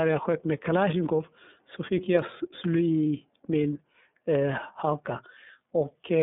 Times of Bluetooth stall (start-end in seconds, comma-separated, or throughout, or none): none